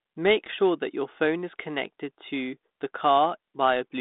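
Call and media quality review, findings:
No faults found; the speech comes over a 32 kbit/s G.726 line, so it sits in a 200 Hz to 3.7 kHz telephone band with nothing above 3.8 kHz and carries only the light coding grain that rate brings.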